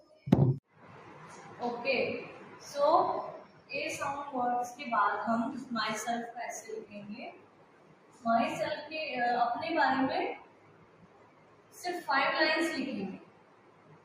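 A noise suppressor made for speech runs on this sound for its entire length, with level swings of roughly 10 dB. It treats steady tone, ambience and reverberant tails as noise, so sustained material sinks while attacks pass through. The result pumps and thins. On a waveform the envelope breathes unevenly. A spectrogram shows sustained partials and decays fading early instead of trailing off smoothly, while transient columns stay intact.

Sound cut by the noise suppressor appears as distinct dips. The first runs from the start to 0.26 s, at about 7 dB down. The next spans 0.67 to 0.83 s, about 10 dB down. Four more dips of about 11 dB follow, at 3.43 to 3.71 s, 7.31 to 8.25 s, 10.38 to 11.78 s, and 13.18 s to the end. In each, held or fading sound ducks and its tail collapses. This shows as a notch in the waveform envelope and a darkened band across the spectrogram, with the longest lasting well over a second.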